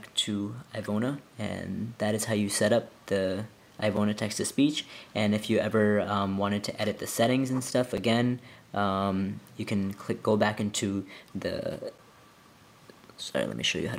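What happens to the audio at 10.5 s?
Nothing goes wrong at 10.5 s; the audio plays through that moment intact, with no dropout, click or other fault.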